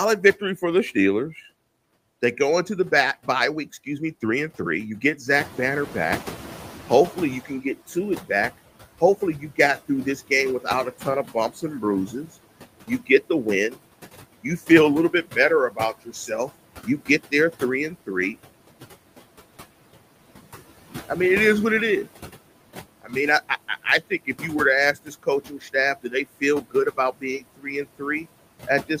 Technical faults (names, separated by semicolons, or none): noise suppressor artifacts; noise suppressor catching up; speech cut by the noise suppressor